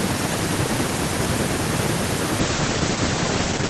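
From 2.4 s to the end, a call bitrate drop from 32 to 11 kbps makes the speech rough and muffled. The bandwidth narrows from 20 kHz to 8 kHz, a coarse codec sound rather than simple filtering.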